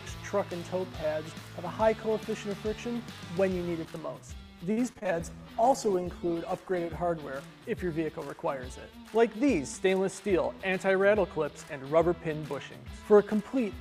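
From 4.71 to 5.07 s the audio turns choppy, with small pieces missing. This is repeated packet loss, heard as robotic sound: four gaps fall in quick succession, the longest 55 ms. Each is papered over by stretching out the last received sound, which gives the buzzy, mechanical timbre. About a third of that stretch is concealed in all: 113 ms filled in and 60 ms that drops out entirely.

Right after, from 5.14 to 7.03 s, the sound goes rough, watery and dull, with the top end noticeably thinned. That is a call bitrate drop. The encoder was pushed from 128 kbps down to 17 kbps, holding at that floor for 1.81 s. At so few bits Opus codes coarsely and trims the high frequencies, which explains both the smeared texture and the muffling until the rate climbs back.

Between 9.68 and 9.93 s the audio briefly rushes forward at unchanged pitch, running at 115% speed. This is a jitter buffer speed-up. 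With more audio queued than the buffer aims to hold, the receiver cut out short pitch-period-length slices again and again, around 50 ms in total. That trims the delay but leaves the passage sounding hurried.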